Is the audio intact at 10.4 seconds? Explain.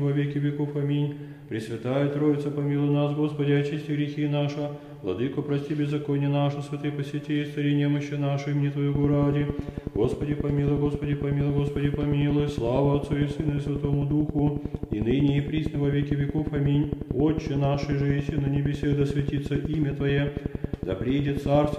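No. At 10.4 s a regular train of clicks is ticking over the sound, about 11 per second and roughly 15 dB louder than the signal, running from 8.95 s to 21.74 s. Likely cause: interference or a faulty connection injecting repeated pulses.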